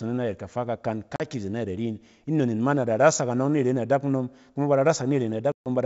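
Packet loss on an ADPCM call hits at 1.16 s, just after "kafa kakan", and again at 5.52 s. Each time the speech drops into hard-edged silence, about 40 ms at first, which fits a couple of lost packets, then about 140 ms, closer to seven. Because the decoder's adaptive predictor and step size lose track of the sender's, the G.722 wideband speech resumes slightly distorted before it settles.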